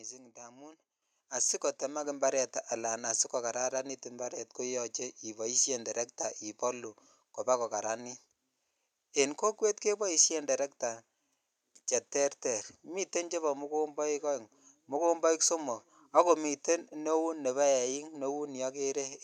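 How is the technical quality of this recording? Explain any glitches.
Two sudden level jumps early on. At 1.02 s and again at 2.04 s the microphone volume stepped up, about 8 dB then about 4 dB more, as the call software pushed input gain in single steps. Speech and background both lurch louder together.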